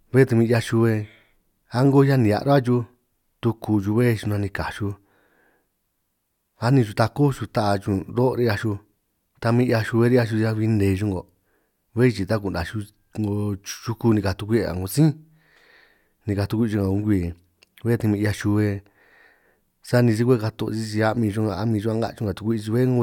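Speech recording with no audible technical faults.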